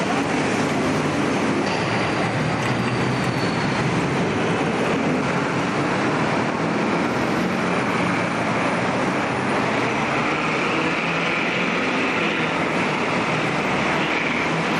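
No technical faults can be heard in this audio at any point.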